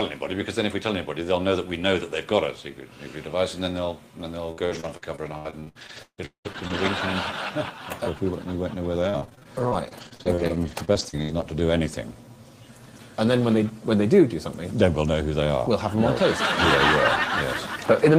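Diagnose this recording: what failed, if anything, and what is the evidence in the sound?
The network stage failed: repeated packet loss (robotic sound) from 4.51 to 7.00 s and again from 9.02 to 11.44 s. Packets went missing or arrived too late, and the receiver patched each hole by extending the last sound it had. The first stretch has fewer but longer holes, up to 190 ms, with about 31% of it concealed. The second is choppier, with holes up to 65 ms and about 20% concealed. The result is stuttering audio with pieces missing.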